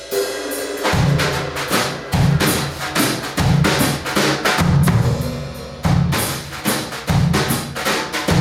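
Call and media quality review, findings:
Gain pumping, throughout. Level swings around 5 dB, dynamics squashed. Likely cause: input gain set far too high, with a fast limiter or compressor clamping every peak and releasing between them.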